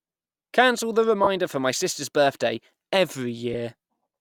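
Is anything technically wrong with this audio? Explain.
Yes. Lost LE Audio frames at 1.23–1.27 s (about 30 ms, which fits four 7.5 ms frames) and 3.53–3.55 s (about 15 ms): the LC3 decoder refilled each gap by repeating the previous spectrum with randomised signs, so the speech briefly turns into a noisy smear.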